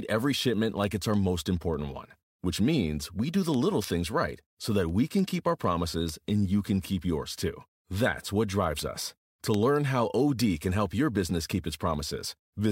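A digital link feeding the recorder was read against a clock that was not locked to the sender's, with the two drifting apart by something around 150 ppm. From 0.24 s to 12.69 s, each slip dropped or repeated a single sample, producing word clock ticks. About a hundred sharp clicks run under the speech at a steady rate, roughly one every 0.15 s, for the whole length of the recording.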